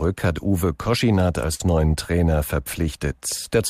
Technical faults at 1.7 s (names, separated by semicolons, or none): burst of packet loss